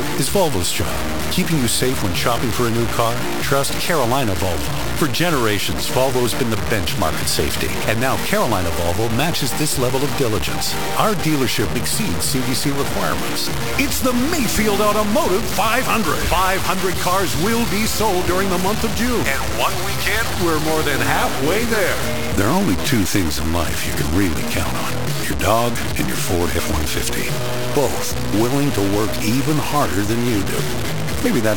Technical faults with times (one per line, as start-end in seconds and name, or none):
0.00-31.56 low bit depth without dither